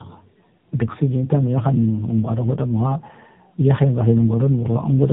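Throughout, tandem speech coding: the audio was decoded and re-encoded by two speech codecs in a row, which fits AMR-NB at the end, leaving it rough, warbly and cut above 3.8 kHz.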